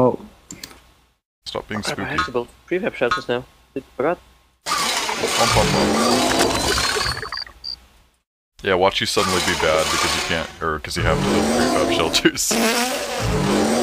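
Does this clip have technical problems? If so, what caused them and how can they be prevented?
No, this clip has no technical problems, so there is nothing to prevent.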